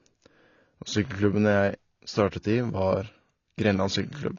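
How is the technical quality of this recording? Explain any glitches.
The recording is held back by plainly audible codec damage across the whole clip. AAC compression, throughout: the speech has nothing above 7.5 kHz, sounding dull and smeared with a fizzy, warbling edge on sibilants. The cause is likely AAC-LC coding with sparse quantisation, a sound that fits a low bitrate of about 24 kbps.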